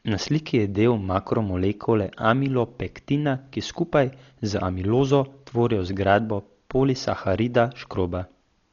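From start to finish, the speech sounds dull and rough. Nothing is heard above 6.9 kHz. Tones carry a fluttering noise where starved frequency lines are filled with dither. This is likely heavy Dolby Digital compression, fitting a bitrate around 40 kbps.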